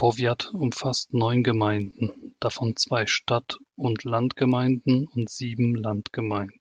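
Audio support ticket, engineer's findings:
Short stall from a late packet, 1.83–1.88 s, between "umfasst neun" and "davon zwei". The sound is held about 30 ms too long with a faint buzz or dip, then resumes where it left off. Probable component: jitter buffer. A packet arrived late, so the buffer ran dry and the receiver stretched the last sound until the packet came. Playout delay grows by 30 ms afterwards. Nothing is lost.

Short concealed packet loss, 1.90–1.94 s, same landmarks, just after the stall. There is a brief smear where about 20 ms of real audio is gone, replaced by 20 ms of extrapolated signal continuing the preceding sound before blending back. Probable component: decoder packet loss concealment on the Opus call path. Its high-frequency ceiling sits near 12 kHz, at a bitrate around 32 kbps.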